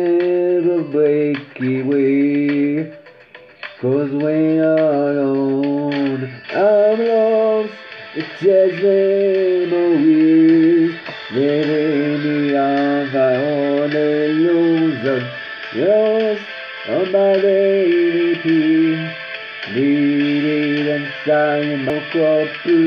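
Damaged data in the compressed stream at 21.90 s: corrupted bytes make the decoder misread the frame and resynchronise, producing a brief chirp, squawk, click or short hole in the sound.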